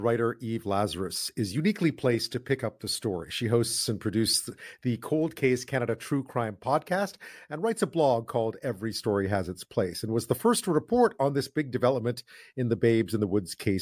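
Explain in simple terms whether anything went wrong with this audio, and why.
Nothing went wrong here.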